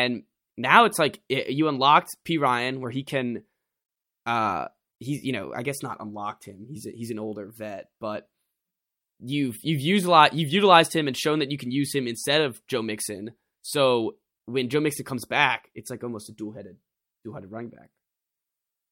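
No technical faults are audible anywhere in the recording.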